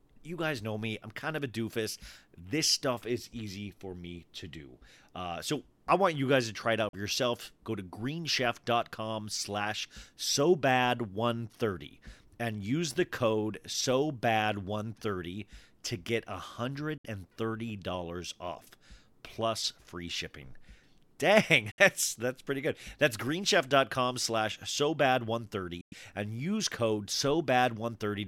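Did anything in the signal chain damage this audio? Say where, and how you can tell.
Yes. The speech cuts to silence four times, then resumes as though it had kept running underneath. The gaps are at 6.89 s between "guys to try it" and "for yourself" (43 ms), 16.98 s (64 ms), 21.71 s just before "that's that's pretty good" (64 ms), and 25.81 s between "slash so bad" and "and use code" (107 ms). This is likely a Bluetooth dropout on the wireless playback link. Packets missed their deadline and were discarded, and each gap fits a whole number of lost frames of about 21 ms.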